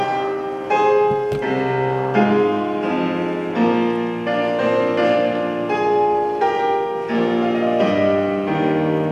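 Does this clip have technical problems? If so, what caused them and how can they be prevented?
No, nothing stood out as a technical problem on listening, so there is no cause to trace or prevention to suggest.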